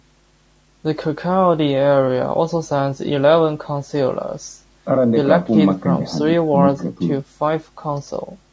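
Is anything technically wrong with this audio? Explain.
Yes. Throughout the speech there is plainly audible low-delay AAC compression damage, likely from AAC-ELD. Its short frames resolve pitch harmonics poorly, so the voice sounds rough and grainy, with noise filling between harmonics, which fits a bitrate around 32 kbps. The call microphone processing's band limit, with nothing above 8 kHz, is expected.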